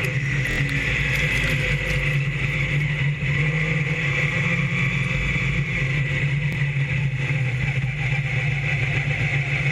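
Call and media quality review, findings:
Repeated buffer, 0.51–0.58 s: short stutter, one ~23 ms slice played three extra times, hard join at each repeat, roughly 70 ms of audio lost. Fits a 1024-sample buffer. Playback underrun, device replays the last buffer.

Repeated buffer, 6.53–6.55 s: one extra play of the same ~23 ms slice, roughly 20 ms lost. Same mechanism.

Waveform: identical copied segments side by side. Spectrogram: repeated slices split by vertical broadband lines at the joins.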